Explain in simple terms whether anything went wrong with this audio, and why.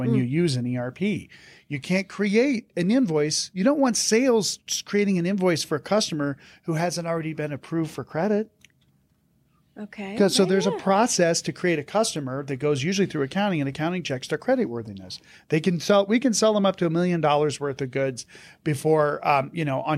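Nothing went wrong: the speech holds steady throughout, with no dropouts, glitches or distortion to point to at any time.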